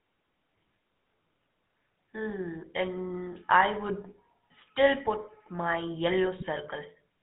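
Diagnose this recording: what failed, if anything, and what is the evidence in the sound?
The failure sits at the codec stage: the speech has passed through the GSM full-rate codec. The band runs only from about 150 Hz to 3.6 kHz, and across the whole clip the voice carries the gravelly, buzzy texture of this coder, which fits a 13 kbps full-rate link. It models the vocal tract and excites it with a sparse, regularly spaced pulse train. That coarse excitation replaces the natural glottal detail, so roughness is audible on every voiced stretch.

A second failure sits on the network side, with GSM bit errors arriving from a degraded radio link. At 4.68 s there is a brief burst of broken speech, and from 6.37 to 6.44 s a longer burst. Corrupted bits reached the decoder as damaged filter, pitch or gain parameters, so those frames were rebuilt with a warped spectrum or a wrong level. The length of the second burst points to roughly four consecutive frames being hit.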